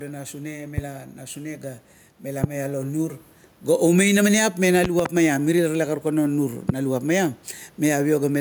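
Throughout the speech, the gain swings by roughly 5 dB, pulling loud and soft parts closer in level and squashing the sound, with the room noise sitting about 39 dB below the speech. This is gain pumping, likely from input gain set too high with a fast limiter or compressor clamping down on each peak.

Sharp pops cut in over the speech at 0.78 to 0.80 s, 2.44 to 2.47 s, 4.84 to 5.02 s (two pops in quick succession) and 6.69 to 6.72 s. They stand roughly 15 to 25 dB above the speech, with the pair near 5 s the loudest, and the speech continues underneath each one. These loud pops are likely sudden voltage steps or spikes from a plug, switch, static discharge or driver glitch, briefly shaped by the circuitry after them.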